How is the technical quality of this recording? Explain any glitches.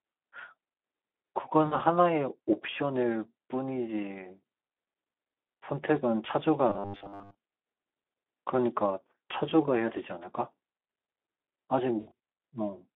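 The technical quality is poor. Codec damage runs through the whole recording, and three separate glitches interrupt the speech.

Speex codec: From start to finish the speech sounds hoarse and grainy, with the thin, noisy texture of low-bitrate CELP coding, which fits Speex at around 11 kbps. The sound is confined to a telephone band of 250 Hz to 3.5 kHz. On a spectrogram, energy stops abruptly above 3.5 kHz and below 250 Hz, and the harmonics look smeared and speckled with noise instead of forming clean lines.

VoIP packet loss concealed by the speech codec: At 1.65 to 1.77 s, roughly 60 ms of audio goes missing. The decoder papers over the gap by extending the last pitch and filter at falling gain, so the speech turns into a brief buzzy smear that fades before recovering. At 11.99 to 12.11 s the losses are scattered over about 200 ms, with the longest run near 80 ms, so the same fading buzz recurs in fragments. 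On a spectrogram these spots show flat, repeated harmonic bands that dim, and the waveform envelope sags.

Robotic sound from repeated short buffers: From 6.70 to 7.38 s the speech becomes a rigid, metallic buzz pinned at 100 Hz. It still roughly tracks the speech. The likely cause is audio arriving too rarely, with the last chunk replayed to fill the time. A 100 Hz buzz fits a 10 ms buffer, and most of the real audio in that stretch appears to be skipped. A spectrogram shows evenly spaced horizontal lines at 100 Hz intervals, and the waveform shows an identical short segment repeating.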